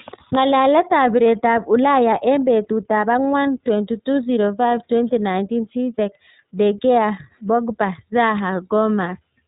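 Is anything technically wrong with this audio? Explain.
Yes. Throughout, the speech carries iLBC codec damage: each frame, likely 30 ms, is coded independently, leaving nothing above 3.8 kHz and a plainly rough, synthetic texture.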